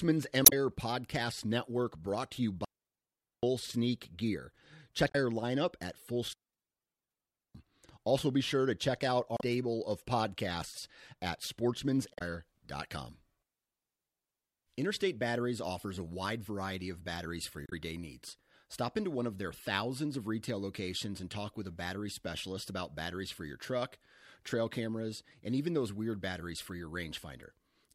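A short glitch at 0.43 to 0.53 s is damaged data in a compressed stream: corrupted bytes make the decoder misread frames, lose sync and search for the next frame header. From 2.65 to 3.43 s the speech drops into a clean hole of near silence, lasting about 0.78 s, with no noise burst on either side. This is a digital wireless dropout, where the receiver mutes after losing too much data. Another compressed-stream blip follows at 5.08 to 5.15 s. After "lineup at", a second wireless dropout mutes the speech from 6.33 to 7.55 s, about 1.2 s. A brief blip at 9.37 to 9.41 s falls between "sure to check out" and "of podcasts at", and another comes at 12.14 to 12.22 s. A third dropout silences 13.96 to 14.67 s, about 0.7 s. After "variety of batteries for", a final corrupted-stream blip occurs at 17.66 to 17.73 s.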